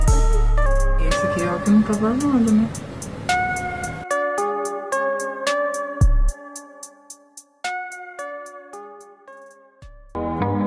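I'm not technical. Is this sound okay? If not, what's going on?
No. From about 0.66 s to the end at 10.67 s, the audio has a wrong sample rate fault: it plays back slower than it was recorded, running at about 92% of normal speed and sitting roughly one and a half semitones lower in pitch. Speed and pitch drop together because the stored samples are fed out too slowly, with no conversion. The amount of slowing fits material recorded at 24 kHz being played back at 22 kHz.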